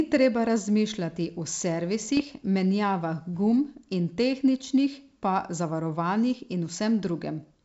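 Between 2.05 and 2.23 s the speech breaks into pops and a rough, crackly burst with brief jumps in level. These are bit errors on an ADPCM link, at a low rate of around a fifth of a percent. Each flipped bit knocks the G.722 decoder's step size and predictor off track, so the damage rings on for some milliseconds.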